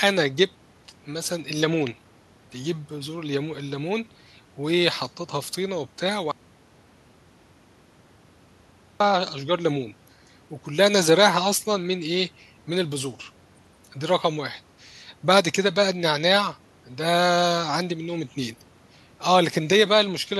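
At 6.32 s the speech cuts off abruptly into dead silence, with no room tone at all, and resumes mid-flow at 9.00 s, roughly 2.7 s lost. This audio dropout to silence likely came from the input being lost while silence kept being recorded.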